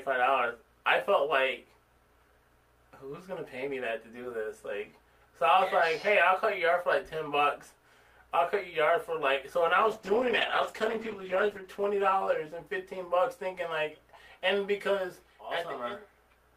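From 9.83 s to 13.21 s there is a call bitrate drop. The call's bandwidth estimate fell and the encoder was forced to spend far fewer bits, and the sound points to a fall from around 48 kbps to around 12 kbps. Coding becomes coarse and the high frequencies are trimmed, so the audio turns rough, watery and muffled. It is at its worst for roughly 1.8 s before the bitrate recovers.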